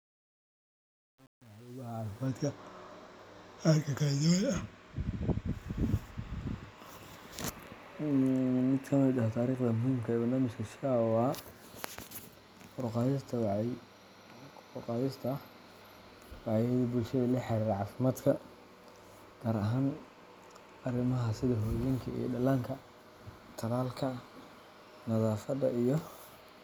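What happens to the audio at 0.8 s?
Truncation distortion on a fade runs from 0.0 to 2.27 s, so 0.8 s falls inside it. The speech fades over that span, but the gain stage keeps too few bits and adds no dither, with steps that fit an 8-bit word length. Near the quiet end each quantization step is coarse, and the waveform collapses into a few square levels. At 0.8 s the fade sounds gritty.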